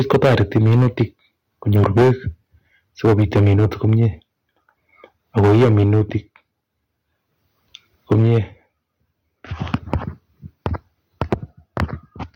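Microphone overload runs from 0.00 to 1.03 s, likely from input driven about 15 dB past the converter's limit. Flattened peaks give a harsh crackle, and the waveform shows squared-off tops. At 0.15 s the microphone volume steps down about 3 dB, a sudden drop in level visible as a step in the waveform envelope. Overload returns at 1.68–2.12 s (about 13 dB over), 3.04–4.06 s with another step down at 3.22 s, and 5.37–6.16 s. It comes back at 8.11–8.38 s with a step down at 8.13 s. Each step likely comes from the call software reacting to clipping. Milder overload, about 7 dB over with only a few samples clipped, follows at 9.74–9.96, 11.21–11.34 and 11.77–11.81 s. Spectrograms show broadband smearing at these clipped peaks.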